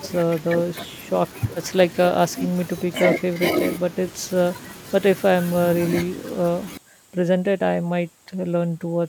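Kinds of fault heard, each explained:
Audio dropout to a faint residue: the wanted signal was likely lost somewhere upstream while the rest of the chain stayed live, so nothing was muted or faded out deliberately. In this speech clip the speech cuts off abruptly at about 6.77 s and never returns before the end, leaving only a faint trace of sound roughly 35 dB below the normal level. That sudden drop to a weak leftover sets it apart from a natural pause or a fade.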